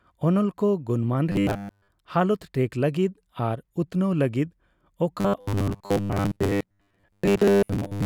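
From 1.32 to 1.88 s, the speech becomes a rigid, metallic buzz pitched at 100 Hz. This is robotic sound from repeated short buffers. New audio likely arrived too seldom, so a 10 ms slice was replayed in place of the missing audio. That fits a buffer of about 10 ms. The whole stretch is affected. The same buzz returns at 5.21 s and lasts to the end, covering most of that stretch.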